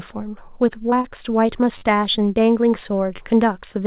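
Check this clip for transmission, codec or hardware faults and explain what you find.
The speech has two kinds of fault: short concealed packet loss and repeated buffers. The call path is narrowband, with nothing above 4 kHz, which fits G.711 mu-law at 64 kbps.

Short concealed packet loss occurs twice, from 0.90 to 0.94 s and from 1.02 to 1.06 s. About 20 ms of audio went missing each time. The receiver extended the preceding sound to cover the gap, then blended back. Each one sounds like a brief smear.

Repeated buffers occur at 1.78 to 1.82 s and at 3.16 to 3.19 s. Fresh audio arrived late, so the device replayed the last 10.7 ms piece, four extra times and then two. That fits a 512-sample buffer. Each repeat is heard as a brief buzzy stutter with hard joins. Little or no audio seems lost.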